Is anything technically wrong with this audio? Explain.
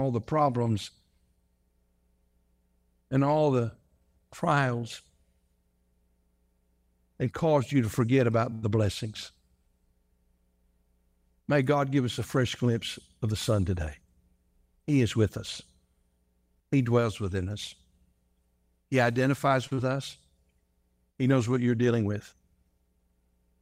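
Yes, this speech clip has several packet-timing faults typical of a network call path.

At 8.53 to 8.63 s and again at 19.67 to 19.72 s there is a short stall from a late packet. The jitter buffer ran dry, so the receiver held the last sound for 90 ms and then 44 ms, producing an audible drawn-out hold, and the delay grew by the same amounts.

From 13.24 to 13.80 s a jitter buffer speed-up trims roughly 50 ms of pitch periods, running the audio at 109% speed. It sounds hurried at unchanged pitch.

At 19.74 to 19.78 s a short concealed packet loss replaces 30 ms of missing audio with extrapolated sound, heard as a brief smear right after the second stall.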